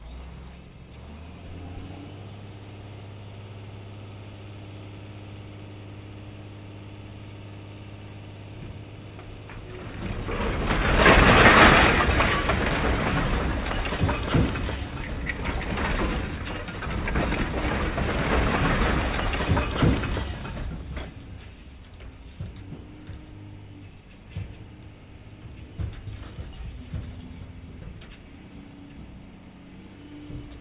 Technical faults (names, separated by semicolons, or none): none